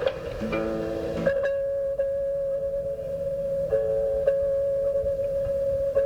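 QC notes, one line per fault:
No faults noted in this music clip.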